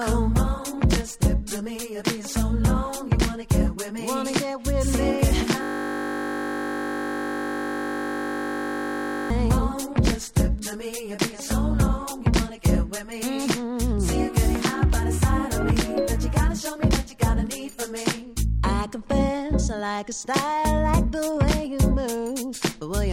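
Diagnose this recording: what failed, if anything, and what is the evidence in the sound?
A steady 50 Hz buzz replaces the sound from 5.63 to 9.30 s: a system hang loop, where the driver froze while the hardware replayed one 20 ms buffer.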